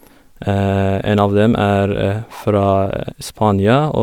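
No technical faults can be heard anywhere in it.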